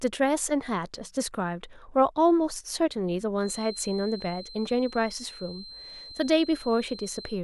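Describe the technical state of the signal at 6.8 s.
A thin, single-pitch whistle near 4.1 kHz sits well below the speech from 3.34 s to the end, a feedback whistle likely from a loudspeaker-microphone loop held just short of runaway.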